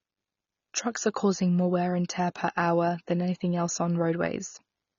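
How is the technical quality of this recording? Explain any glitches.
Technical quality is poor: one fault runs through the whole speech recording. Throughout, AAC compression damage is plainly audible. The sound is dull and cut off above 6.9 kHz, with sibilants smeared and fizzy. A spectrogram would show a flat ceiling and patchy gaps below it. This likely comes from low-bitrate AAC-LC encoding, which fits roughly 24 kbps.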